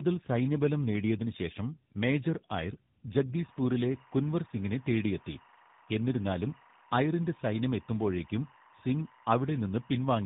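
From the start, the speech shows tandem speech coding. It was coded twice in a row, in a way that points to GSM full rate and then AMR-NB with a G.711 leg between. Each coder worked on degraded input, leaving rough, muffled, warbly speech with nothing above 3.8 kHz.

From 3.36 s to the end, timecode bleed appears: linear timecode at 23.976 frames per second leaks in as a square wave flipping between roughly 1 kHz and 2 kHz. It is heard as a steady chirping warble, roughly 30 dB below the speech.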